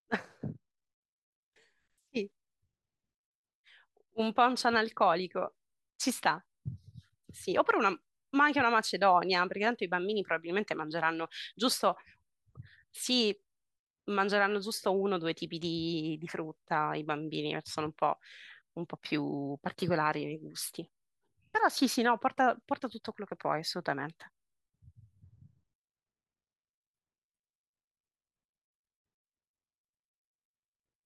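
Nothing to report: no technical faults can be heard at any point in the speech.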